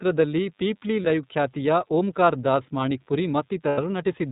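Running under the whole clip is a DECT cordless phone buzz: a thin, steady hum pitched at 100 Hz and rich in harmonics, faint, roughly 40 dB below the speech. It comes from a nearby DECT handset or base station transmitting a brief radio burst every 10 ms. The audio circuitry rectifies those bursts, so the radio timing turns into an audible tone that stays put regardless of what is said.

The speech has also passed through the iLBC codec, and the damage is plainly audible. Nothing above 4 kHz survives, so the sound is narrowband and dull. Voiced sounds take on a slightly rough, synthetic edge. The framing fits iLBC's 13.33 kbps, 30 ms mode.

At 1.02 to 1.05 s, just before "ಲೈವ್ ಖ್ಯಾತಿಯ ಓಂಕಾರ್ ದಾಸ್", there are lost iLBC frames. A 30 ms gap is bridged by a brief held, buzzy sustain, consistent with one missing frame. The decoder concealed it by repeating the last pitch cycle with added noise.

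At 3.69 to 3.79 s, right after "ಖ್ಯಾತಿಯ ಓಂಕಾರ್ ದಾಸ್ ಮಾಣಿಕ್ಪುರಿ", a longer 90 ms loss, about three frames, produces a stretched, breathy vowel that fades as the concealment runs on. Because iLBC frames are independent, the voice snaps back cleanly as soon as packets resume.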